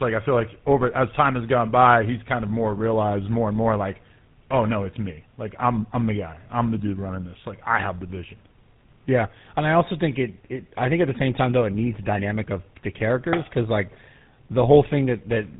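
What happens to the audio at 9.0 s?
At 9.0 s the speech carries tandem speech coding, present from start to finish rather than as a local event. The audio was decoded and re-encoded at a link border, so the second speech coder worked on the first one's already damaged output, which fits two GSM full-rate stages with a G.711 link between them. The errors stack: the speech sounds rough, muffled and warbly, with nothing above 3.8 kHz.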